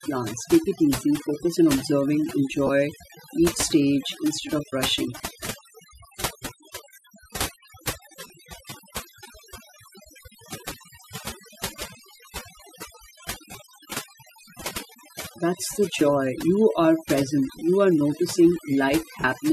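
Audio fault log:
Throughout: overdone noise removal. The denoiser is clamping hard on any band near its noise estimate, so the background drops and breaks up into little twinkling specks, and the quieter parts of the speech get scooped out.
2.67–2.70 s (after "easy focus on observing"), 5.18–5.20 s (after "stage instead of rushing"), 8.27–8.30 s, 13.52–13.54 s, 19.21–19.24 s: lost LE Audio frames. Each gap of 20 to 30 ms, which fits two or three dropped frames, gets patched by reusing the last spectrum with scrambled signs, so tonal bits smear into a brief noisy blur. The light codec layer underneath doesn't add anything you'd notice here.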